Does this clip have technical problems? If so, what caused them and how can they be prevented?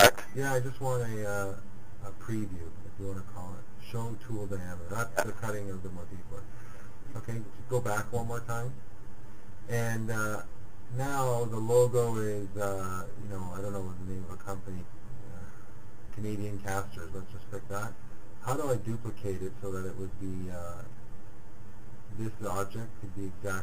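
Yes. Channel delay (comb filtering) is present throughout. One channel lags the other by roughly 10 ms, and when the two are folded to mono, the shared content cancels in fixed notches. These start near 50 Hz and repeat about every 100 Hz, leaving the sound hollow and phasey. Time-aligning the channels before summing them to mono, and checking mono compatibility, prevents it.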